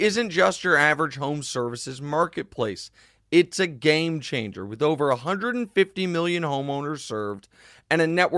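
From 6.4 s to the end of the clip, the sample-rate converter taking this speech from 48 kHz down to 24 kHz was restarted on every block: the resampler was restarted on every 100 ms block. At each block boundary it lacked the true neighbouring samples, so each edge carries a small error. That produces a regular ticking at 10 Hz riding on the speech, heard only while there is signal and falling away in the pauses.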